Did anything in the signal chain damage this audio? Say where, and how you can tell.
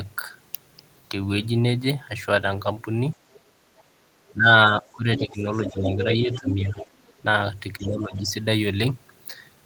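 Yes. Both faults come from the call-processing stage, most likely an echo canceller that couldn't fully separate the far end from the near talker.

The other side's voice leaks through faintly at 3.33 to 3.4 s and 3.78 to 3.83 s, roughly 30 to 35 dB under the speech. It is much stronger, only about 10 dB down, from 4.9 to 5.91 s and 6.32 to 7.2 s, and about 25 dB down from 7.8 to 8.21 s. On a spectrogram these show as a second, weaker harmonic stack whose pitch contours don't follow the talker's. That is loudspeaker sound the canceller left in the microphone path.

Speech is suppressed in double talk from 4.31 to 6.85 s, for about one and a half seconds in total, with dips down to roughly 15 dB. From 7.78 to 8.32 s there is about half a second of it, dipping roughly 10 dB. Both spans coincide with the leaking far-end voice. The waveform envelope sags in uneven chunks during those stretches. 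The processor heard both sides at once and turned everything down.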